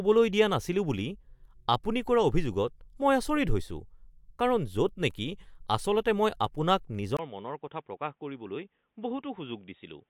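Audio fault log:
7.17–10.10 s, input switched to a poorer device: after a 20 ms silence the speech turns boxy, with nothing above 3.8 kHz, about 5 dB quieter, and a new noise floor. The likely cause is a change of microphone. A plain filter or codec change would not alter level and background together.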